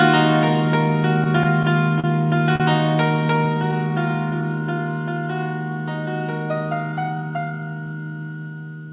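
From 1.24 to 2.06 s there are repeated stalls (stutter). Packets arrived late four times, and the receiver held the last sound, about 77 ms in total, longest 38 ms. Nothing is lost, but the audio drags and stutters.

At 2.56 to 2.62 s comes a short stall from a late packet. The buffer ran empty, and one sound is held 40 ms too long before continuing.

From 3.54 to 4.79 s a jitter buffer slow-down adds 91 ms by repeating small pieces. Playback runs at 94% speed, same pitch, with drawn-out sounds.

Throughout, the call path cuts everything above 4 kHz, which fits G.711 A-law at 64 kbps.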